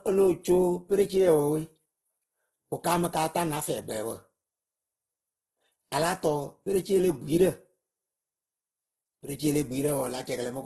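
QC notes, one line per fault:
throughout, low-bitrate audio saved at a high bitrate: likely a very low-bitrate encode re-saved as high-bitrate MP3; the first encode's losses remain, with nothing above 12.1 kHz.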